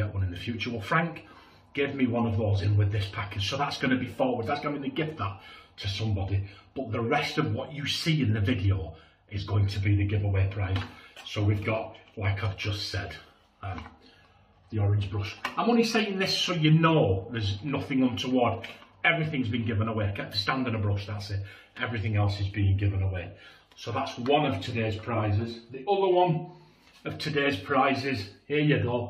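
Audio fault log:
No faults detected in this clip.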